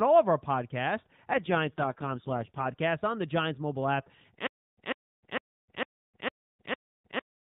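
From 1.34 to 2.66 s, between "all of our podcasts" and "on the", an AMR rate drop cuts the narrowband link from 12.2 to 4.75 kbps, shifting bits into error protection. The band and timing stay intact, but the speech turns rough, buzzy and synthetic until the rate recovers.

After "mobile app", at 4.47 s, the stream likely stalled, producing a stutter with silent gaps that lasts to the end. A 145 ms fragment replays six times, each followed by about 309 ms of digital silence, a 454 ms cycle, and the speech meant for those gaps is lost.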